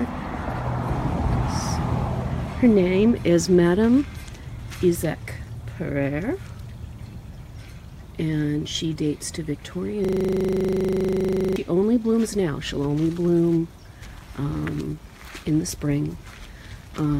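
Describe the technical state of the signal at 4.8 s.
At 4.8 s the signal is intact, with no dropout, distortion, glitch or other fault audible at that point.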